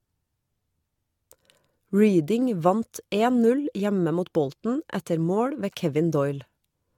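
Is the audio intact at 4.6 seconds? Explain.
No. At 4.6 seconds, as throughout the clip, the speech shows generation loss, most likely from being decoded and re-encoded with a lossy codec about five times, with a character that fits AAC-LC at around 96 kbit/s. Each pass quantises again on a shifted frame grid, so the errors stack up. The result sounds swirly, smeared and hollow, with softened attacks and nothing above 18.8 kHz.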